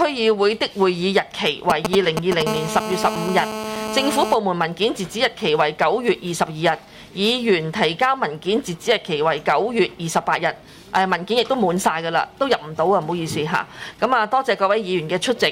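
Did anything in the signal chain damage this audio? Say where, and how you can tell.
Yes. The analogue wiring picked up and rectified radio pulses from a nearby 2G handset, producing GSM signalling bursts from 1.7 to 2.42 s. They are heard as a galloping dit-dit-dit of short 217 Hz buzzes, roughly as loud as the sound itself.

Immediately afterwards, the same analogue stage rectified that phone's transmission during a call, giving GSM phone buzz from 2.47 to 4.34 s. It is a steady, raspy 217 Hz tone rich in harmonics, about 6 dB below the sound, and it tracks the handset's burst rate rather than the audio.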